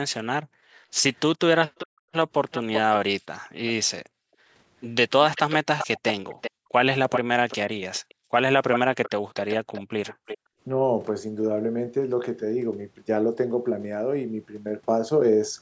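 From 0.43 to 0.9 s the room sound drops by about 40 dB and then returns. This is background gated by the echo canceller: it pulls the microphone down hard while the far-end loudspeaker plays. A waveform shows the noise floor collapsing to near-flat, and a spectrogram shows a dark vertical band. The same dips recur at 1.87–2.12, 4.05–4.51, 6.51–6.72, 8.06–8.33 and 10.14–10.6 s.

From 1.78 to 3.71 s, and again from 5.35 to 10.38 s, a delayed copy of the speech trails it by 387 ms. This is likely an echo leak, where the canceller failed to remove the loudspeaker's sound. In the first stretch the copy sits well below the speech. In the second it is only slightly quieter. A spectrogram shows time-shifted repeats of the harmonic patterns.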